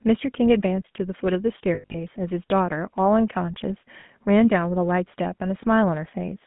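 Speech here comes through the GSM full-rate codec for its whole length, with plainly audible codec damage: a buzzy, gravelly roughness, because the codec rebuilds the voice from a vocal-tract model driven by a coarse, regularly spaced pulse excitation. The sound is consistent with 13 kbps full-rate GSM. A spectrogram would show energy confined to a line band of about 150 Hz to 3.5 kHz, with a hard ceiling and a rough, grainy harmonic texture. Lost GSM frames also occur between 1.74 and 1.98 s. About 160 ms of audio is missing, scattered across 200 ms, which fits roughly eight 20 ms frames, with the longest gap around a tenth of a second. A single 20 ms dropout falls between 4.00 and 4.04 s. At each loss the decoder repeats the last good frame's settings, so the voice briefly freezes into a metallic ring. On a spectrogram these gaps appear as short smeared, flat-lined harmonic patches, and on the waveform as repeated cycles instead of normal variation.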